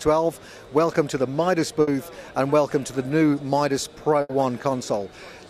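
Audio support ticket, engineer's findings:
Burst of packet loss at 1.81 to 1.89 s: about 60 ms of sound held and faded by receiver concealment, then playback resumes with roughly 60 ms of content skipped. Probable component: network path / jitter buffer.

Burst of packet loss at 4.21 to 4.31 s: same signature, longer. About 80 ms concealed as a decaying continuation of the last sound, about 80 ms of content missing after the gap. Consecutive packets lost or late.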